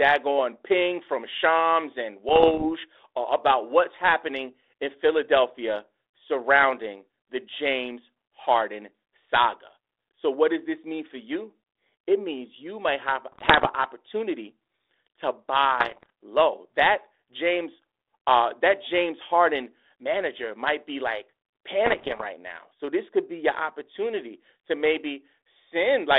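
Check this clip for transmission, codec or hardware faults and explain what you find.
Four brief bursts of damage occur, at 2.29 to 2.67 s, 13.32 to 13.75 s, 15.80 to 16.10 s and 21.86 to 22.23 s, each under half a second. They occur within a band-limited telephone sound that fits 32 kbit/s G.726 ADPCM.

Bit errors on an ADPCM link: pops and rough, grating bursts with sudden level jumps. Flipped bits corrupt the decoder's step size and predictor, so each error smears on for milliseconds. The first burst is lighter, with errors around half a percent. The later three are heavier, nearer one and a half percent.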